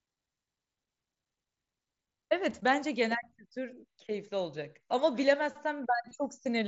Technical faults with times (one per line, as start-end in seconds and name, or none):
2.50 concealed Bluetooth headset packet loss
6.09-6.11 concealed Bluetooth headset packet loss